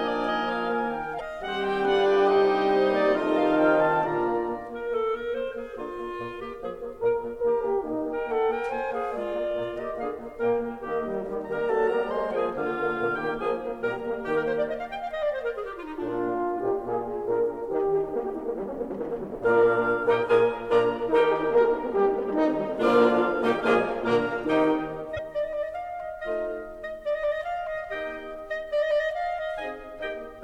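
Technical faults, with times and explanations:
1.17–1.21 s and 25.16–25.19 s, damaged data in a compressed stream: The music breaks into a brief glitch at each point. Part of the compressed data is corrupt there. The decoder misreads those frames, loses sync, and hunts for the next valid frame header.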